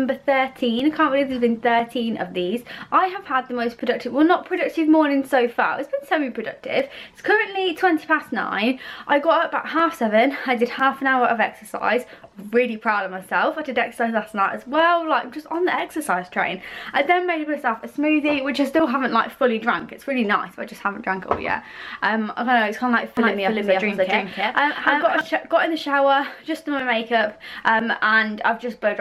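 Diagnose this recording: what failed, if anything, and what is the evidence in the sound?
A doubled audio track between 23.17 and 25.21 s: a clean, equally loud copy trails by about a third of a second, with abrupt edges, likely a second, slower capture path.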